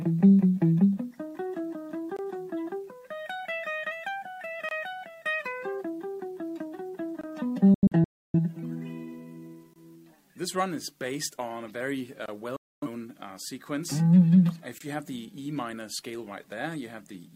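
Gaps between chunks appear at 2.17, 4.69 and 7.21 s. Each is a 23 ms hole of silence, recurring every 2.5 s as the audio stream's chunks are joined.

A digital broadcast dropout runs from 7.74 to 8.40 s. The receiver lost valid frames and muted with 3 ms fades, leaving several holes totalling 0.43 s over 0.6 s, the longest 0.3 s.

Chunk gaps recur at 9.74 and 12.26 s.

A second dropout from 12.56 to 12.88 s mutes 0.26 s of sound.

A final chunk gap occurs at 14.78 s.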